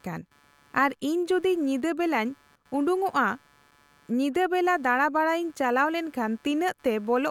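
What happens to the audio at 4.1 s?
At 4.1 s you're hearing computer activity noise, though it isn't specific to that moment; it runs under the speech for the whole clip. Load swings in the processor, graphics card or mouse are pushing around the ground the audio circuit shares, and that leaks in as a buzzy, chirpy texture pulsing around 150 times a second. It sits well down, roughly 35 dB under the speech, and tracks the machine's activity, not the talking.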